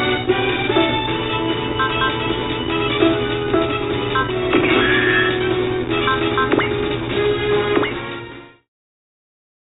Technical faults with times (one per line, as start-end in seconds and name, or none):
none